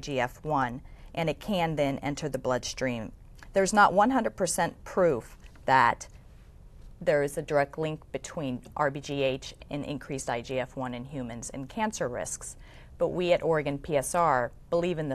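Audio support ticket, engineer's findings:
Nothing stood out on listening; no fault found to log against this ticket.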